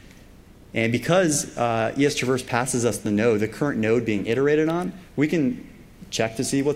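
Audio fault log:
No dropouts, glitches, level problems or other faults can be heard anywhere in the clip.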